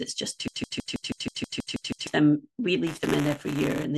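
From 0.48 s to 2.07 s, the speech stutters mechanically: a fragment about 0.16 s long plays ten times back to back, identical each time, before normal audio resumes. This is a broken-record loop. The player or stream likely stalled and kept resending the last piece of audio it held, so whatever should have been heard during those seconds is simply gone, replaced by the repeating slice.

From 2.86 s to 3.85 s, a steady robotic buzz at 188 Hz rides on the speech, present only while sound is playing. This is buffer tearing, which fits a 256-sample buffer. The writing and reading sides of the ring buffer have slipped, so each period contains a small sliver of audio from roughly ten milliseconds earlier. The hard joins on both sides of that sliver repeat at the buffer rate, producing the rattle.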